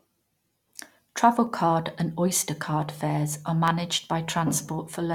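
Three single sharp clicks occur at 1.47 s, at 2.82 s just before "fares are", and at 3.68 s just after "fares are". The likely cause is dropped samples: a fraction of a millisecond of the stream is missing, so the waveform jumps abruptly. Unlike a dropout, no sound goes silent.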